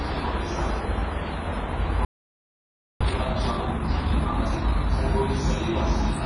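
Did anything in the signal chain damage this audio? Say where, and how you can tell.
Yes. At the codec stage, the whole clip is ringing and washy, with a hiss that swells and fades with the sound. This is likely WMA compression, heavily damaged, and fits a low bitrate around 24 kbps zeroing weak spectral lines.

At the playback stage, the sound cuts out mid-flow at 2.05 s and stays silent until 3.01 s, a gap of about 0.96 s. This is a playback stall. The likely cause is the player running out of buffered data or its thread being blocked.

Also at playback, from 3.01 s to 4.91 s the sound is hurried at 1.5 times normal speed. Its pitch stays unchanged. This is time-compressed catch-up. The player cuts and cross-fades small pieces to clear the backlog left by the stall.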